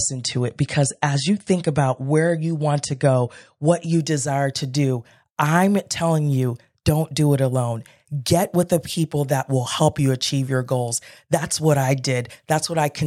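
From 0 to 4.0 s the speech carries the sound of an adaptive stream starting at a low bitrate. The player opened on a cheap version of the stream to begin quickly. Nothing above about 10.6 kHz survives, so the treble is dull and thin. Coding artefacts are stronger, with a swirly, smeared edge that fits an MP3 of around 42 kbit/s. At 4.0 s the player switches to a better version, likely near 128 kbit/s. The quality jumps at once, with no gap.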